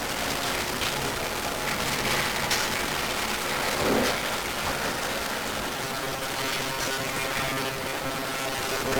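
From start to end, the audio carries heavy 1-bit DFPWM compression damage. Each sample keeps a single bit that nudges an adaptive level up or down. The result is fuzzy and crackly. Strong broadband noise buries the treble in hiss. The damage fits a 48 kbps stream.

From 5.77 s to the end, a robotic sound from repeated short buffers takes over. It is a rigid, metallic buzz at 134 Hz. The likely cause is audio arriving too seldom, with each short stretch replayed to fill the gap. About half of the sound is repeats.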